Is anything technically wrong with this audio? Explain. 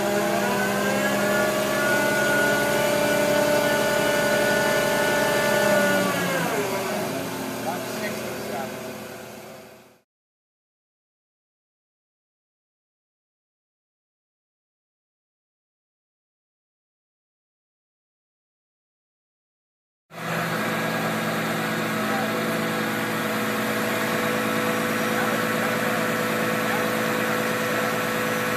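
Yes. At 4.89 s there is a single sharp tick, broadband and unrelated to the surrounding sound, peaking at about -27 dBFS. This is a bit error spike: one flipped bit in a single sample throws its value off by a power of two before the next sample returns to normal.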